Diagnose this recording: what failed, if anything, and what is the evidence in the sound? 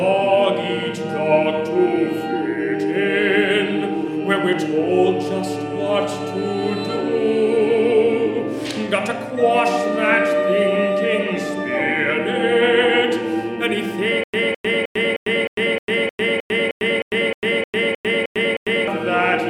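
Stutter with silent gaps, 14.24 to 18.88 s: a 209 ms burst repeats 15 times every 309 ms between 100 ms silences, likely from a stalled playback buffer.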